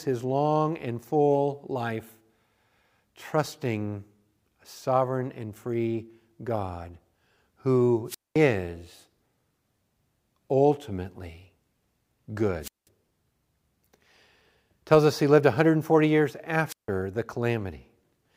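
A wireless microphone squelch dropout hits at 8.06 to 8.38 s, 12.61 to 12.88 s and 16.67 to 16.88 s. The radio link fades. Hiss swells, then the receiver's squelch mutes the speech for 214 ms, 192 ms and 160 ms respectively.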